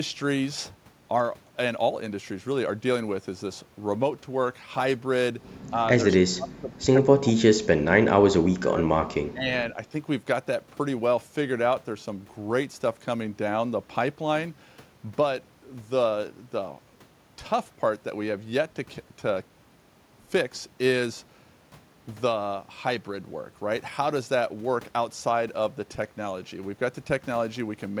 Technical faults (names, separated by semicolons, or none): speech suppressed in double talk